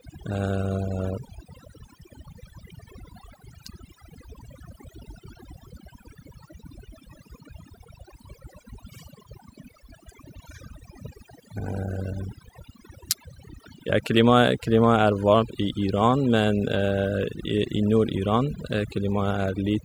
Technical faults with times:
0.00-19.84 overdone noise removal

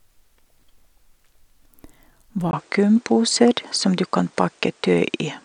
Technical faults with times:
2.51-5.45 input switched to a poorer device

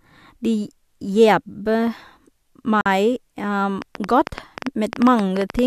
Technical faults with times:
2.81-2.86 gap at a join of encoded pieces
3.82-5.60 train of clicks

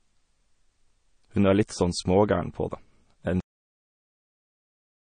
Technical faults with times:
0.00-5.06 MP3 compression
3.40-5.06 cut-off end

